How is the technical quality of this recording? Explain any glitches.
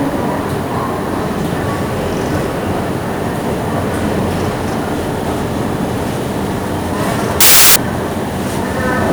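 The recording has one clear glitch. From 7.41 to 7.76 s, samples built from the wrong bytes turn into loud, harsh broadband noise: the low bits become dominant, filling the spectrogram broadband.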